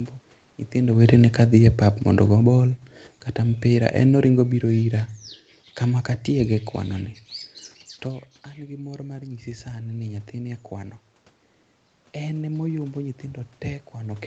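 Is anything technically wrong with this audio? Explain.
Yes. The automatic gain control moves the level twice, and the room noise rides along with each change.

From 0.75 to 2.86 s there is automatic gain falling. The talker comes closer to the microphone around 1 s, so the input jumps. The gain control reacts by easing its gain down by about 9 dB over two seconds. The speech starts loud, then sinks, and the background sinks with it.

From 8.04 to 11.02 s there is automatic gain rising. The talker moves away around 8 s, and the input drops by about 15 dB. The gain control slowly lifts its gain by about 6 dB over three seconds. The voice and room noise swell together, but the level stays below where it was.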